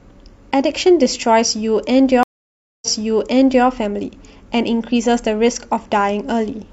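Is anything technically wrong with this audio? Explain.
Yes. At 2.23 s a stream reconnect occurs. The connection dropped, and a fresh decoder restarted mid-stream. A 0.59 s silence, a flat blank band on the spectrogram, is followed by audio resuming 0.84 s earlier, so a passage repeats before the fault ends at 3.65 s.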